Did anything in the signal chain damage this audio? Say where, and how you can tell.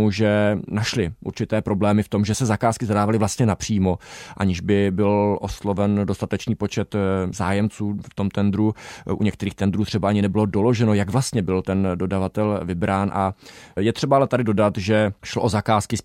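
No, nothing in this speech recording stood out on listening as a sign of damage at any stage of the signal chain.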